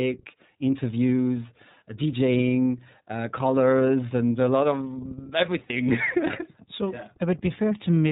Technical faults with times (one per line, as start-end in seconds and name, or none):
0.00-8.11 iLBC codec
5.66-5.71 lost iLBC frames